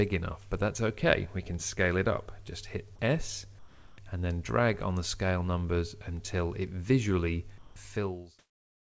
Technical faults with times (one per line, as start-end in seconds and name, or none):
2.96-2.99 sound dropped by the voice detector
3.59-3.98 sound dropped by the voice detector
7.58-7.76 sound dropped by the voice detector
8.39-8.98 comfort noise in place of the background